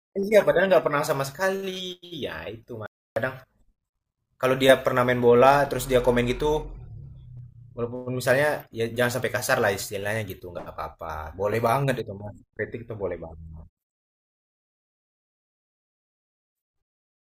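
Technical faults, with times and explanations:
2.86 to 3.16 s, audio dropout to silence: the speech cuts off abruptly mid-flow and resumes just as sharply about 0.3 s later, and the gap between is dead silence with no room tone or background hiss. Whatever was spoken in that stretch is simply missing. The likely cause is a brief loss of the input signal, such as a momentary disconnect, a failed link or an accidental mute, while the recorder kept writing silence.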